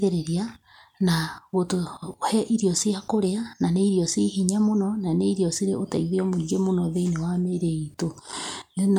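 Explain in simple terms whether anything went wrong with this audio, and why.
Nothing went wrong here: the speech signal stays steady and unbroken throughout, with no technical faults to be heard at any point.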